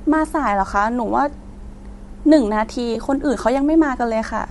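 From start to end the speech carries a breathy, grainy edge on its upper frequencies, as if a fine hiss were laid over the top of each sound instead of clean detail. This is most likely Bluetooth LC3 compression, the transform codec of LE Audio, running at a rate that points to roughly 48 kbps with short 7.5 ms frames. Parts of the upper spectrum are zeroed and refilled with noise. Unlike steady broadband hiss, the graininess follows the speech and vanishes in pauses.

At 2.94 to 2.97 s comes a brief patch of lost LE Audio frames. For about 15 ms the sound turns into a noisy smear that keeps the rough colour of the moment before, which fits two lost 7.5 ms frames. The decoder repeated the last spectrum with scrambled signs. Unlike a dropout to silence or a hard click, the gap is filled with hiss-like texture, and it is too short for any fade to set in.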